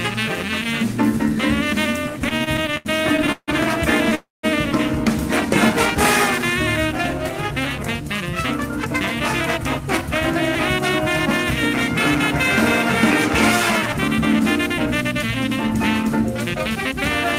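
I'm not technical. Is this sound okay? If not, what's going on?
No. From 2.19 to 4.13 s there are repeated stalls (stutter): the audio catches 17 times, the longest for about 0.16 s, adding roughly 0.4 s in total. Data arrived late, so the receiver kept stretching the last bit of sound. Nothing is lost, but it drags.

Right after, from 4.15 to 4.45 s, comes a call audio freeze. The sound hangs as a fading buzz, then goes silent for about 0.18 s before resuming where it stopped. The likely cause is data held up in transit, leaving the receiver nothing to play.

From 8.61 to 10.02 s and again from 14.70 to 16.94 s there is a jitter buffer speed-up. The receiver had built up too much waiting audio and trimmed tiny slices to catch up. Playback runs about 2% fast at unchanged pitch.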